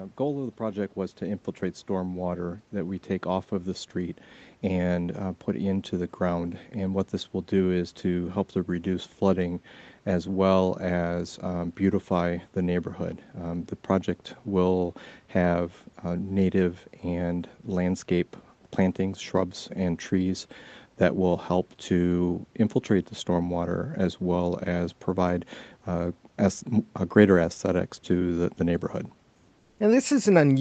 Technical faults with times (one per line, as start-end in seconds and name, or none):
0.25-7.02 automatic gain rising
29.59-29.77 comfort noise in place of the background